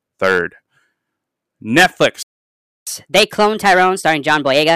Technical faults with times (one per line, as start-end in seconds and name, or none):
0.00-4.75 hard clipping
2.22-2.87 playback stall
2.87-4.75 catch-up at higher speed